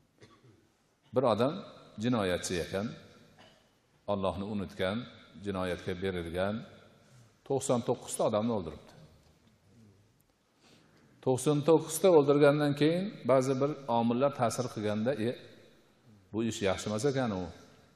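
Nothing wrong is audible anywhere in the clip.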